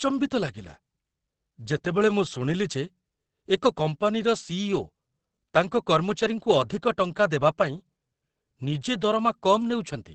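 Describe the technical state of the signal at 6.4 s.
At 6.4 s the speech carries heavy codec damage, present for the whole clip and not just this moment, likely from Opus compression. There is nothing above 8.5 kHz, so the band is cut at a wideband limit, and the tone is muffled and hoarse. That sound points to the encoder's speech-oriented SILK mode, which trades detail for intelligibility when bits are scarce. The narrow band and degradation fit a rate of about 12 kbps.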